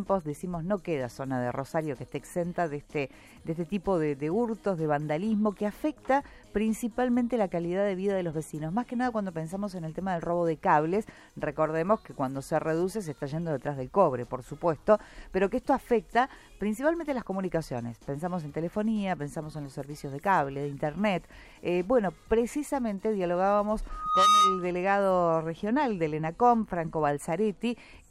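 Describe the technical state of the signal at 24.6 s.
At 24.6 s the signal is dominated by loudspeaker feedback squeal, which runs from 23.89 s to 24.71 s. A microphone is picking up the loudspeaker it drives, and at 1.2 kHz the loop gain has gone past unity, so that frequency reinforces itself on every pass. Over the first 0.4 s or so it swells into a sustained squeal, ending up roughly 10 dB above the rest of the sound, and it is still at full strength here, just before it ends.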